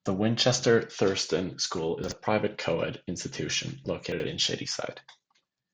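At 2.04 to 2.12 s and again at 4.12 to 4.24 s, chunks out of order: a 40 ms block plays one, then two, chunks late, briefly jumbling the speech. Each spot shows three abrupt waveform steps and thin broadband spectrogram lines where formants jump backwards.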